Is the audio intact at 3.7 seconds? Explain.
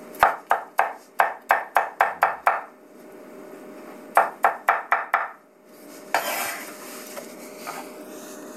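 Yes, the audio is intact at 3.7 seconds, with no audible fault at that moment.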